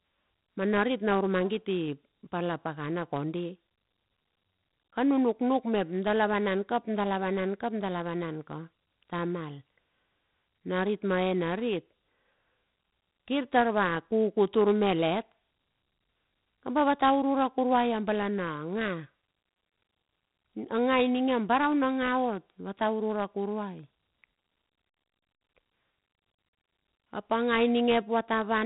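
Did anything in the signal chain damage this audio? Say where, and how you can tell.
Yes. Gritty hiss rides every loud syllable throughout, sharp onsets crackle, and nothing remains above 3.8 kHz. This is 4-bit ADPCM compression at the codec stage. Its error tracks signal level, its step size lags fast attacks, and the heavy grit fits roughly 32 kbps.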